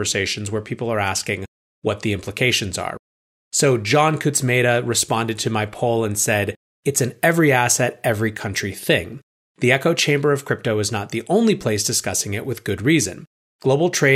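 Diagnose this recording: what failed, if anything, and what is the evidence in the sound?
Nothing in this speech recording points to a failure at any stage of the chain. There is no event in the sound that calls for a diagnosis.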